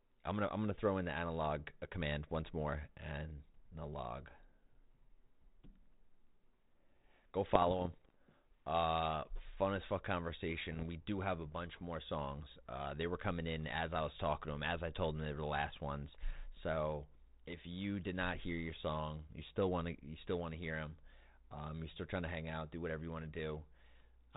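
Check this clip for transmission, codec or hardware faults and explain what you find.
Two stretches of the speech carry bit errors on an ADPCM link. The first runs from 7.52 to 8.17 s. The second is shorter, from 10.72 to 10.84 s. Bits were flipped in transit at a low rate, around a few per thousand. Each flipped bit throws off the decoder's step size and predictor. The error then rings on for a few milliseconds. The result is pops and rough, gritty bursts, with brief jumps in level.

The link itself sounds like G.726 ADPCM. The band stops below 4 kHz, and the light coding noise fits 32 kbit/s.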